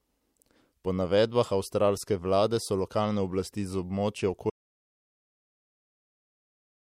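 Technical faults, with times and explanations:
4.5 s to the end, audio dropout to silence: the speech stops abruptly mid-flow and the rest of the clip is dead silence, with no room tone, hiss or decay left underneath. That marks it apart from a fade-out or a noise gate closing, both of which taper or leave some residual floor. The input was likely lost, through a disconnected device or failed link, while recording carried on writing silence, so whatever followed is gone.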